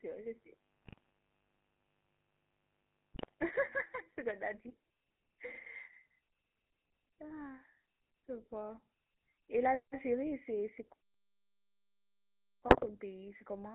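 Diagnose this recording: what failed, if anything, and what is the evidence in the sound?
The whole clip has gone through the GSM full-rate codec, a codec-stage problem. The band stops at roughly 200 Hz and 3.5 kHz, and the speech carries that gravelly, buzzy roughness you get when the excitation is rebuilt from sparse regular pulses driving a vocal-tract filter. The damage is plainly audible throughout and fits a 13 kbps full-rate stream. Everything above the top cut-off is simply gone.

There's mains buzz from the start to about 4.5 s, which points to the analogue wiring stage, something like an unshielded lead or a dimmer or rectifier nearby. It's a steady raspy buzz on a 50 Hz fundamental, sitting roughly 35 dB under the signal, so it's low. The rasp comes from switching spikes twice per cycle, which push a stack of harmonics well up into the kilohertz range.

Then there are GSM bit errors, a network fault on the radio link, in three short bursts at 0.83 to 1.09 s, 3.14 to 3.34 s and 12.68 to 12.91 s. 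Each is a quick cluster of squawks, pops and gargling. Corrupted filter, pitch or gain parameters reach the decoder, so over ten to thirteen consecutive frames the spectrum gets bent out of shape or the level jumps before it recovers.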